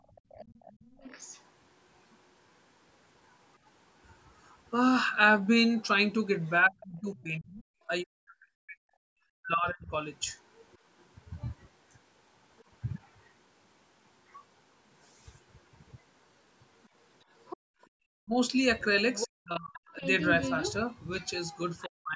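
Right at the start, 0.00 to 0.74 s, the room background gets gated by the echo canceller. While the far end plays out of the loudspeaker, the canceller clamps the mic, and the background dips by about 19 dB at its deepest. It adds up to only a fifth of a second or so, so you hear brief holes in the room tone rather than a full dropout.

Overlapping that, from 0.16 to 1.41 s, there's the other side's voice leaking through, faint, around 25 dB under the talker. That's most likely loudspeaker echo the canceller didn't fully remove.

Then from 6.67 to 9.92 s the talker gets hit by speech suppression in double talk. With both ends talking, the canceller likely couldn't tell the talker from the echo and ducked everything. The voice drops by something like 40 dB in pieces, roughly two seconds of it in total, so it comes across chopped.

There's a tiny leak-through blip at 10.73 to 10.77 s, very low, around 35 dB down, likely residual echo again. 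The big one runs from 16.83 to 21.88 s, where the far-end voice sits only about 10 dB below the talker, likely loudspeaker echo the canceller didn't fully remove.

Inside that stretch the background is gated again from 17.57 to 17.67 s, a sharp dip of about 36 dB lasting around a tenth of a second. Double-talk suppression returns from 17.95 to 20.03 s, chopping roughly 0.7 s of the talker by up to about 40 dB, and again from 21.86 s to the end, another 0.3 s or so, likely the same canceller fighting the overlap.

The call mic processing is also present. It cuts the lowest bass and leaves nothing above 8 kHz, which is normal for this path.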